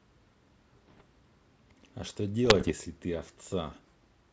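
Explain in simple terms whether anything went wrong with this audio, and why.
Two stretches of this speech are damaged by bit errors on an ADPCM link, from 0.72 to 1.04 s and from 2.45 to 2.72 s. Some of the digital bits carrying the sound were flipped in transit. Each wrong bit throws off the decoder's running estimate of the signal and its step size, so the error keeps ringing for a few milliseconds. The result is pops, rough bursts and brief jumps in level. The second stretch is harsher, with roughly twice the rate of flipped bits.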